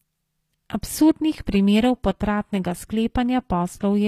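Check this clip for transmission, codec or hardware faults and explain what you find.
One codec fault runs through the whole speech clip: HE-AAC compression is the likely cause of gritty, lispy sibilants, whose treble is copied up from lower bands rather than coded. Unlike a plain low-pass loss, the top stays bright but mismatched, stops near 15.5 kHz, and fits a bitrate around 24 kbps.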